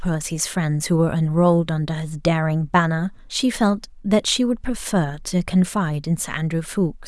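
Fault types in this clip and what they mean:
No faults detected in this speech clip.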